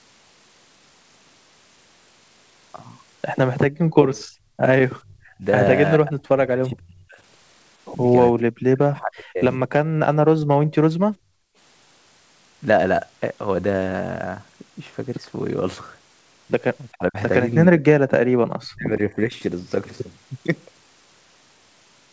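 First up, from 3.7 to 4.64 s, the room tone behind the speech sinks by about 24 dB for well under a second and then comes back. That's the background gated by the echo canceller: while the far end was playing through the loudspeaker, the canceller clamped the microphone right down, taking the ambience with it until it let go.

Then the speech itself starts breaking up, in pieces, at 5.02 to 5.44 s, 5.98 to 7.19 s and 8.56 to 9.63 s. The level drops hard, something like 35 to 40 dB at the worst points, and the talker goes patchy or disappears. This is most likely speech suppressed in double talk. Both sides were speaking at once, and the canceller couldn't tell the near talker from the loudspeaker echo, so it pushed everything down.

From 9.91 to 11.56 s the background gating comes back, deeper this time at about 37 dB, with around a second of lost room sound across that stretch.

The double-talk chopping returns near the end at 16.92 to 17.17 s, 17.68 to 18.1 s and 18.63 to 19.34 s. 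These are shorter bites, each a few hundred milliseconds, with the same deep dips of roughly 30 to 40 dB.

Across the whole clip the band stops at 8 kHz, which fits a wideband G.722 call at 64 kbps.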